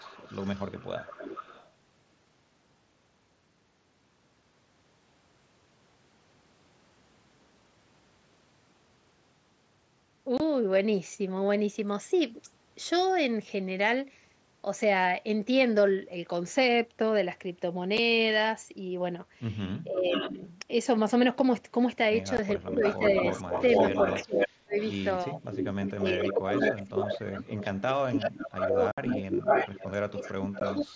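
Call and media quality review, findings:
Echo leak, 0.0–1.69 s: delayed copy of the talker arriving about 438 ms behind, roughly 20 dB under the direct sound. Comes back much hotter later, about 5 dB down, at 20.11–20.32 s (489 ms), 22.73–27.66 s (501 ms) and 28.25–30.85 s (513 ms). Likely a far-end loudspeaker setup whose echo canceller isn't fully cancelling, so mic pickup of our own audio gets sent back.

Speech suppressed in double talk: talker dips while the other side is also active. At 19.84–20.41 s it's brief, down roughly 15 dB. At 22.59–25.4 s there's about a second of chopping, deepest around 35 dB. At 25.96–30.94 s there are about 3 s of losses, up to about 25 dB. The echo canceller can't separate the near talker from the returning echo and attenuates both. These windows overlap the echo leak stretches, which fits that picture.

Unconcealed Bluetooth headset packet loss: short hard-edged holes. 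One runs 10.38–10.40 s, about 22.5 ms. Others fall at 17.98 s (7.5 ms), 22.37 s (15 ms) and 30.60 s (15 ms). The worst is 28.92–28.98 s, a 60 ms gap. The lengths fit whole 7.5 ms mSBC frames dropped on the headset link and replaced by silence or an idle pattern without concealment. Band edge sits at 8 kHz, consistent with the mSBC wideband link.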